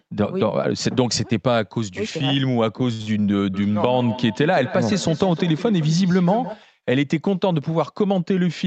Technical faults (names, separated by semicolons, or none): short stall from a late packet; burst of packet loss; feedback echo between two devices